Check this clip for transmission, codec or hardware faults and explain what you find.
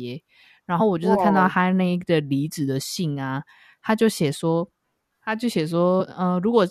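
Three brief faults appear, all from damaged data in a compressed stream. At 0.79, 2.95 and 5.99 s, corrupted frames make the decoder misread and resync. Each is a short chirp or blip in the speech.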